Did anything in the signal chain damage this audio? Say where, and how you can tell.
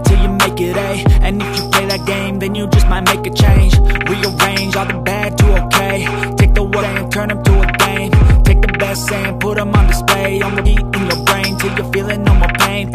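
Yes. A steady low tone at 60 Hz sits under the sound for the whole clip. It is strong, roughly 10 dB below the signal. That is mains hum, and it enters at the analogue wiring stage. A ground loop, or a transformer close to the cables, couples the power line into the signal path. The tone never changes with the programme. That tells you it was added before conversion, not carried by the source itself.

The second fault sits in the codec or storage stage. Compressed frames were skipped at 6.81 s, 8.94 s and 10.65 s. At each point the audio lurches forward, by roughly 0.7 s, 0.4 s and 0.15 s. Those jumps fit whole 24 ms frames dropped, about 30, 15 and 7 of them.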